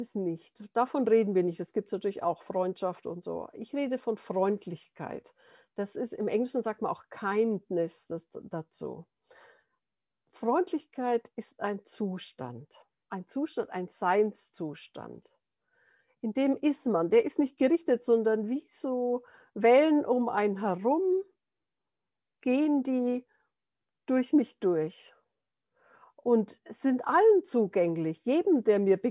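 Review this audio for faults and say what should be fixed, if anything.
No faults detected; nothing needs fixing.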